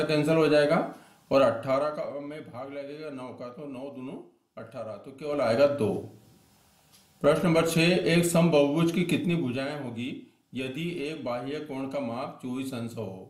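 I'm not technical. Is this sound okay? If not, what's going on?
No. From 1.49 to 2.30 s the sound gets quieter, and from 5.16 to 5.55 s it gets louder, but both changes happen in about twenty small jumps a second. That causes zipper noise, a ticking buzz, unlike a smooth fade.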